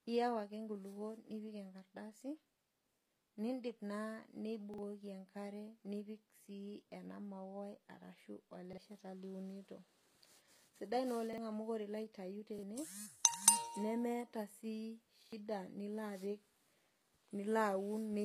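Throughout the speech, the treble sounds synthetic. S sounds are gritty and metallic, and nothing is heard above 15.5 kHz. This is likely HE-AAC compression at a low rate, around 24 kbps. The codec keeps only the lower spectrum. It rebuilds the top by copying lower bands upward under a coarse envelope. The copied harmonics do not line up with the real ones, so the damage is plainly audible.

The first repeated buffer comes at 3.02 s. A stretch of about 46 ms plays twice, with a hard join. That length fits a 2048-sample buffer. New audio arrived late, so the device replayed the last block. It sounds like a short stutter. The same fault recurs at 4.74 s, at 8.73 s after "ena mauai ashu", at 11.33 s, and at 12.59 s after "ilo aitayu". At 15.23 s, just before "nilo apik", the block plays three times. That stutter is longer, losing roughly a tenth of a second.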